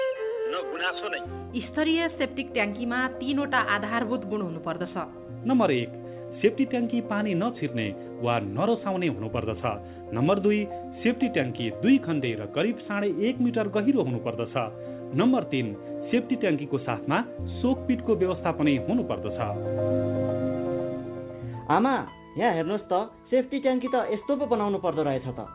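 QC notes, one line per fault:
No faults found in this clip. The call path audibly stops at about 4 kHz with its usual coding noise, which fits a 64 kbps G.711 A-law link.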